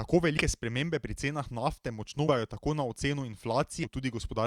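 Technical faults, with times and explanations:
0.37–0.42 s, 2.27–2.32 s, 3.83–3.86 s: compressed frames skipped. Speech jumps ahead by whole 20 ms frames, roughly 100 ms first, then about 300 ms twice. Those frames were missing from the file or refused by the decoder as damaged, so the audio skips ahead by their length at each join.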